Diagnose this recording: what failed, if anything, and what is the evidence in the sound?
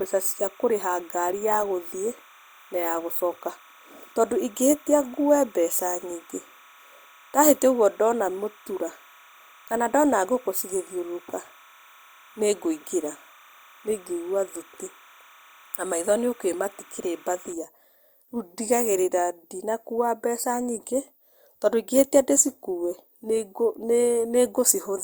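A steady chirping warble sits behind the speech from 0.0 to 17.53 s, roughly 30 dB beneath it, flipping between pitches near 1 and 2 kHz. This is timecode bleed in the analogue wiring: linear timecode, whose pattern fits 30-frame code, is leaking in from a neighbouring track or cable.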